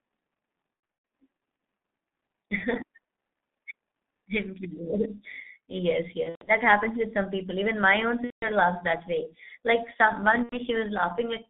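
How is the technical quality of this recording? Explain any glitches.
The quality is poor: the speech is narrowband and degraded throughout, and it breaks up four times.

From start to finish the speech sounds muffled and hoarse, with smeared consonants and nothing audible below about 200 Hz or above about 3.7 kHz. That is the signature of the G.723.1 codec, heavily applied and consistent with its 6.3 kbit/s mode. It codes speech in 30 ms frames with a slowly updated vocal model, so fine spectral detail and fast transitions are lost.

At 0.74 to 1.10 s, 6.23 to 6.52 s (ending just before "happens with some people"), 8.24 to 8.48 s (between "my own" and "laughs that way"), and 10.43 to 10.59 s (right after "some one"), the speech turns into a stretched buzzy tone or coloured noise that fades, then stays weak for a moment afterwards. This is VoIP packet loss concealed by the speech codec. 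The decoder fills the gaps by extrapolating its last pitch and filter while lowering the gain. The gaps are scattered rather than solid, with the longest runs about 120 ms in the first two bursts, and the damage fits roughly 90 to 270 ms of missing audio per burst.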